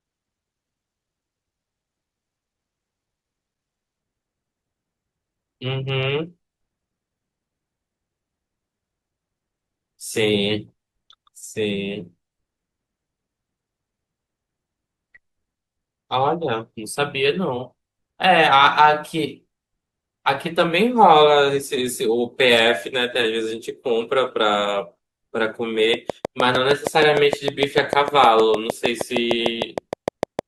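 Speech, with two issues. The first 4.0 s come from an adaptive stream starting at a low bitrate. The treble is dull and smeared, roughly what a 16 kbit/s Opus stream gives, until it steps up cleanly to something like 64 kbit/s. From 25.94 s to 30.4 s there's a train of clicks, about thirty regular ticks at 6.5 a second, sitting roughly 15 dB above the speech and likely caused by interference from nearby gear or a faulty connection or power supply.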